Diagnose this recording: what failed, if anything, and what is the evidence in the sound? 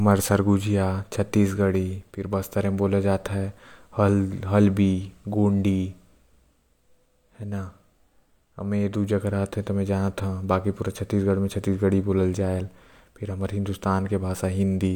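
Nothing in the recording points to a failure at any stage of the chain. No dropout, distortion, glitch or other defect can be heard anywhere in the speech.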